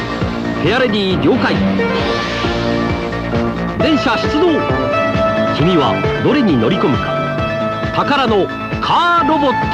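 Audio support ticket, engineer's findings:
No faults found on listening. Nothing audible to attribute to any component in the chain.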